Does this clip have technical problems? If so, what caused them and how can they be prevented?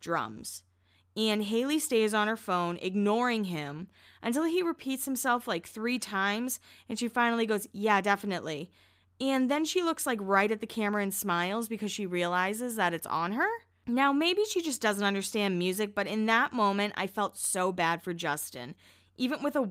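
No, this clip has no technical problems, so there is nothing to prevent.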